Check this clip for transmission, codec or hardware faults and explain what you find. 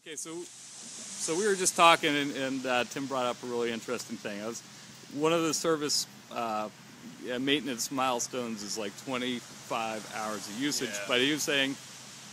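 No faults turn up in this clip.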